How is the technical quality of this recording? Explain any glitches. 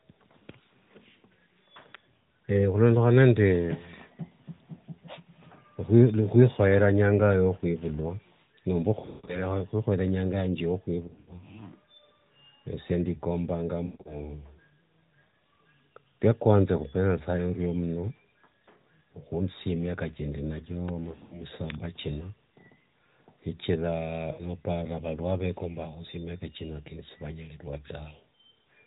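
Speech comes through a narrowband AMR mobile link, with nothing above 4 kHz. Five bursts of lost AMR speech frames break it up. They fall at 9.0 to 9.46 s, ending just before "inyanga yange", and at 11.08 to 11.33 s, right after "inyanga yange". Further bursts come at 13.86 to 14.22 s, 21.12 to 21.44 s and 24.32 to 24.43 s. Radio errors corrupted these frames, so the decoder discarded them. It then repeated the last good pitch and vocal tract settings at falling gain. Runs of up to 140 ms smear out and fade. Isolated losses leave short dips and warbles.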